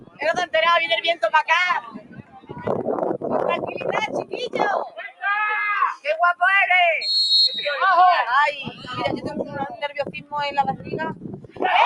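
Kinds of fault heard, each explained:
Noise suppressor applied to music or sounds: A suppressor tuned for speech stays active across the whole clip, treating steady, sustained parts of the sound as noise and pulling them down, with the gain swinging by roughly 15 dB. Sharp onsets pass while held portions and tails sag, so the level pumps and thins. Unlike ordinary compression, it tracks how steady the sound is, not how loud it is.
Sound cut by the noise suppressor: These are specific stretches where the suppressor clamped down harder than elsewhere: 0.0–0.54 s, 1.81–2.68 s, 3.61–5.23 s, 8.64–10.33 s and 10.75–11.62 s, with the deepest drops about 15 to 17 dB. Sustained or decaying sound sinks or is cut short while sudden events survive. Unlike a dropout, the sound dips and recovers with the suppressor instead of vanishing abruptly.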